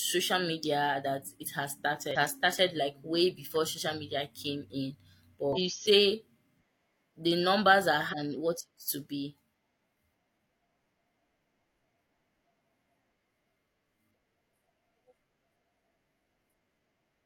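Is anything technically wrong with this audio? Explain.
Yes. Damaged data in a compressed stream occurs at 2.11–2.16, 5.53–5.58, 8.09–8.14 and 14.10–14.14 s: corrupted bytes make the decoder misread frames and lose sync until it finds the next header, so the speech gives a brief chirp or squawk, each about 40–50 ms long.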